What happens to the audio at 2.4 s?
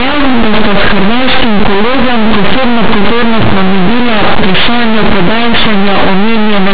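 At 2.4 s, as throughout, linear audio read as companded: 8-bit linear samples decoded as mu-law fling values just on one side of zero to the largest outputs while those on the other side stay small, causing very loud, harsh distortion and broadband spectrogram smear.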